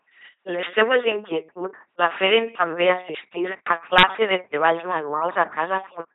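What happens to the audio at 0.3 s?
At 0.3 s the speech is carrying the LPC-10 vocoder artefact that runs through the whole clip. Each frame is resynthesised from a short all-pole filter fed by a buzzy pulse train or hiss, giving a robotic timbre. The heavy damage and absence of content above 3.9 kHz fit a 2.4 kbit/s LPC-10 coder.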